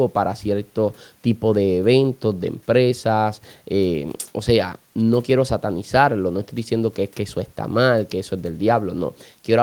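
Nothing in the recording stands out as a technical fault at any point, so there's nothing to flag here.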